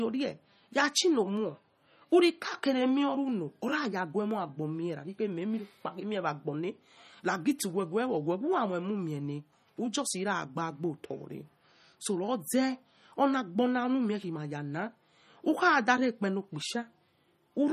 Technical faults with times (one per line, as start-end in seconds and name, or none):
0.00-17.73 MP3 compression